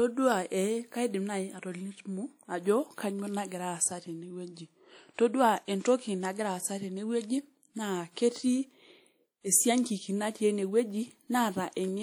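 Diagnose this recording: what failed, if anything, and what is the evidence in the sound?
The codec stage is at fault. Throughout the speech there is a washy, ringing quality and a hiss that swells and fades with the level of the voice, while the top end still reaches about 20.1 kHz. That pattern points to likely WMA compression at a modest bitrate, something like 48 kbps. The transform's quantisation noise is smeared across long blocks, and weak spectral detail is discarded, so the damage is plainly audible.

Pre-echo from the same codec appears at 5.14 to 5.18 s. For about 42 ms before a sharp onset, a brief hiss leads in, and the attack itself arrives softened and smeared. The transient landed late in a coding block. The encoder scaled its noise to the loud portion and spread it across the whole block, so the quiet stretch just ahead of the attack was filled with noise that nothing masks.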